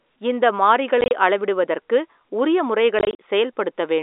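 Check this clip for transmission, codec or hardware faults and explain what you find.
The fault is packet loss filled with silence, in two bursts, heard through the 300 Hz to 3.7 kHz band of the G.711 telephone coding. From 1.01 to 1.11 s, about 60 ms drops out in scattered gaps, the longest 30 ms. From 2.99 to 3.18 s, about 110 ms is lost across 200 ms, the longest gap 40 ms. The gap sizes fit 10 ms packets. The receiver inserted silence for each missing packet, so the speech chops into holes with hard edges.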